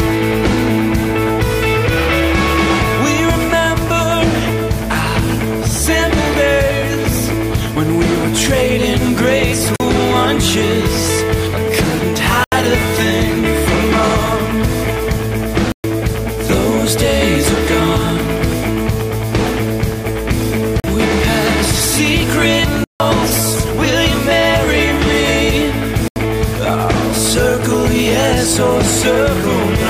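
At 9.76, 12.44, 15.72, 20.8, 22.84 and 26.08 s the sound drops out in blocks of digital silence lasting 40, 80, 120, 40, 160 and 80 ms, which points to whole output buffers of about 40 ms going unfilled in time. Each gap starts and ends abruptly, so the shorter ones come across as pops and the longer ones as holes. Unlike a faded dropout or concealed loss, nothing is smoothed or filled in. It is plain silence.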